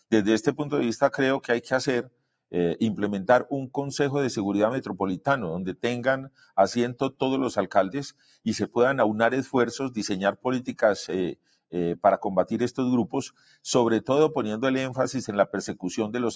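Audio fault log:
throughout: noise suppressor applied to music or sounds. The level keeps swelling and sinking by about 5 dB, so the sound pumps and flutters rather than holding steady, and sustained parts and tails thin out while sharp onsets pass through. A speech-oriented noise suppressor is still active, mistaking held tones, ambience and reverberant decay for background noise and pulling them down. The call microphone path behind it limits the band, with nothing above 8 kHz.
2.03–2.26 s, 6.29–6.52 s, 8.11–8.46 s, 11.35–11.73 s, 13.30–13.57 s: sound cut by the noise suppressor. In each window the sound suddenly ducks by about 17 to 18 dB, a hollow dip of a fifth to a third of a second where the sustained or fading material is cut short. The suppressor briefly classed this content as noise and attenuated it far harder than the surrounding audio, which is why steadier portions sink while transients survive.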